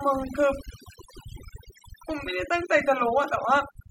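Overdone noise removal runs through the whole speech clip. The noise reducer is set so aggressively that frequency bands near its noise estimate are pulled down or switched off, taking quieter parts of the voice with them. The background drops and breaks up into twinkling specks.

At 2.22 s a sharp snap or tight cluster of clicks sits on top of the sound, lasting only about 13 ms. It is likely an electrical switching spike, a brief arc from a nearby switch, motor or static discharge picked up on the audio line.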